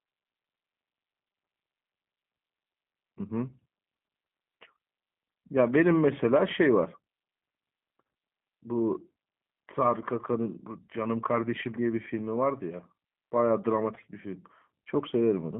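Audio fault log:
Throughout: G.729 codec. The whole clip sits in a narrow telephone band, from about 150 Hz up to 3.5 kHz, so there's no air or sibilance on top. The damage is plainly audible: the speech is rebuilt from a vocal tract filter, a pitch predictor and a few pulses per subframe instead of the real waveform, which gives it that rough, slightly synthetic edge. It fits an 8 kbit/s G.729A stream.
13.95 to 14.00 s: VoIP packet loss concealed by the speech codec. There's a brief smeared patch, buzzy or noise-like, lasting about 54 ms. It sounds like a single 10 ms frame went missing, with the decoder filling the gap by extending its last pitch and filter settings at falling gain. Because each frame leans on the one before it, the distortion keeps going for a few tens of milliseconds after the audio comes back.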